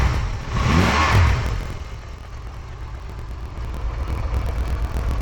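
Right through the clip it's interleaved audio read as planar: each 24 ms block's left-right samples get split into halves, so everything drops an octave and sounds doubled and choppy at 41.7 Hz.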